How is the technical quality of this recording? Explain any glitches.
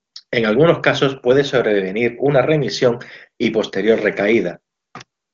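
No faults are audible: the speech carries the band limit of AMR wideband (HD Voice) coding, with nothing above about 7.6 kHz, and the coding leaves at most a faint trace, which points to the codec's top rate of around 23.85 kbit/s.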